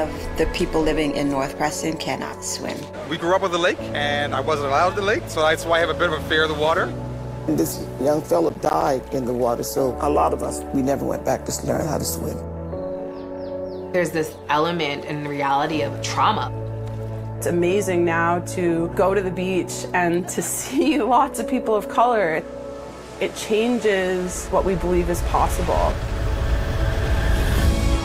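At 8.49 s there's a short patch of processor overload crackle that runs to about 8.87 s. The machine couldn't get its small audio buffers out on time, and it missed a string of them. Each miss dropped a brief hole of silence with hard edges, which fits buffers of around 10 ms, maybe ten or so in that stretch. Together they make a gritty, tearing crackle over the sound, and it stops once the load clears.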